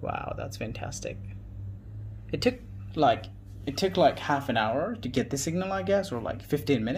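From 1.80 s to 2.57 s the audio runs about 5% fast and rises about 88 cents, just under a semitone, then snaps back to normal. This is a drift correction step, likely from clock-matching software changing its resampling rate abruptly to rebalance its buffer.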